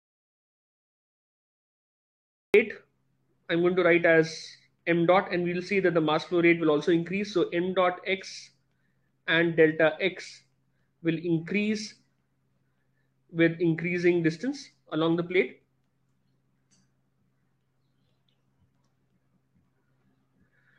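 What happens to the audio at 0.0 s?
An audio dropout to silence is already under way. It lasts until 2.54 s. The gap is silent with no room tone, likely from lost input.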